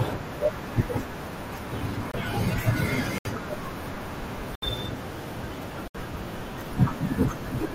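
Speech that drops abruptly into dead silence four times: a short hole of about 36 ms at 2.12 s, then longer gaps of about 82 ms at 3.18 s and 4.55 s and about 85 ms at 5.88 s, each spanning three frames against the first's one. These are corrupt frames muted. Bit errors damaged compressed frames, the decoder rejected them, and the player substituted silence for whole frames, so the gaps cut in sharply while the surrounding timing stays intact.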